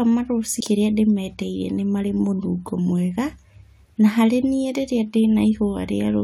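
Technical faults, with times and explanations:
0.59 s, damaged data in the compressed stream: corrupted bytes made the decoder misread a frame and lose sync, producing a brief blip in the speech.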